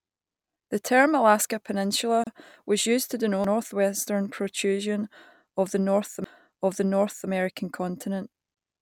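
A speech recording with two distinct faults. The first is a gap at a join of encoded pieces, heard as a short hole in otherwise continuous speech: 31 ms from 2.24 to 2.27 s, right before "was used to", and 24 ms from 8.54 to 8.57 s. The joins recur every 6.0 s, which points to the audio having been encoded in 6 s segments and concatenated without trimming. Each segment keeps its encoder start-up delay and final-frame padding, so silence sits at every seam, and the speech resumes exactly where it stopped. The second fault is a CD skip, heard at 3.44 s, just after "was used to", and again at 6.24 s. Each is a brief mute, a few milliseconds at the first and about 10 ms at the second, heard as a tick or short gap, after which playback continues from a different point in the material. That is the sound of the laser jumping to another turn of the disc spiral after a knock or a surface flaw, with the player muting across the jump.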